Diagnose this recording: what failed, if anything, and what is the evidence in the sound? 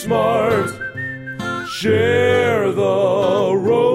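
Nothing failed here as far as I can hear; there's no dropout, glitch or other damage anywhere in the recording.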